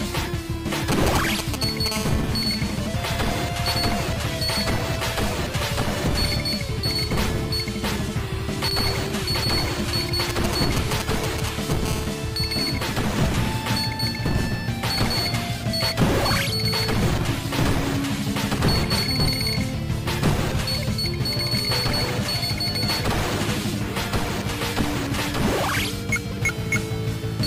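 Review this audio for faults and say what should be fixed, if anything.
GSM signalling bursts, 0.92 to 1.88 s and 10.30 to 11.87 s: a nearby 2G phone's short groups of radio pulses are rectified by the audio circuit into galloping ticks and brief 217 Hz buzzes, the first about as loud as the sound itself.

GSM phone buzz, 1.92 to 3.40 s and 11.88 to 12.88 s: the same phone, now transmitting continuously at 217 bursts per second, gets rectified into a steady, raspy 217 Hz buzz rich in harmonics, about 14 to 15 dB below the sound.

To prevent this, keep mobile phones away from the microphone, cables and interface, or switch them to airplane mode while recording.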